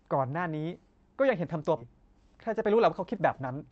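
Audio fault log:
1.77–1.79 s, skip ahead: about 0.7 s of speech was dropped while later audio waited, so playback jumps forward with no gap filled.
1.86–3.70 s, jitter buffer speed-up: the overfull buffer trimmed short pitch-period pieces, about 0.2 s in total, so speech runs 10% fast at unchanged pitch, sounding hurried.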